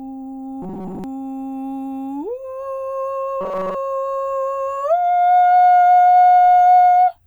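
From 0.62 to 1.04 s and again from 3.41 to 3.75 s, the music turns into robotic sound from repeated short buffers: a rigid, metallic buzz fixed at 188 Hz, likely from a roughly 5.3 ms buffer being looped while most of the real audio is skipped. Unlike a dropout, sound never stops.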